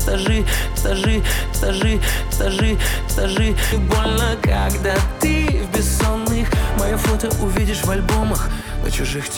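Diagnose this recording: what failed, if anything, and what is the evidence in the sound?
From 0.78 to 3.72 s there's a broken-record loop: a 0.78 s chunk plays four times back to back, identical each pass, and the audio that belonged there is gone. Likely a playback or stream buffer stalled and kept resending its last fragment.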